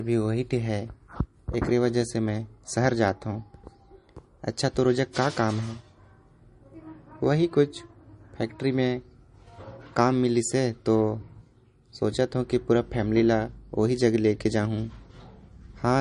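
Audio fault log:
throughout MP3 compression: the speech sounds watery and swirly, with chirpy s sounds and nothing above 10.6 kHz. The likely cause is MP3 coding short of bits, which fits a rate near 40 kbps: the encoder cuts the treble and drops weak frequency lines that flicker between frames.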